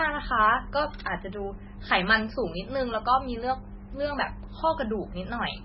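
Throughout the speech, likely MP3 compression at a very low bitrate leaves nothing above 5.6 kHz, with weak frequency components flickering frame to frame, giving a watery, swirly sound.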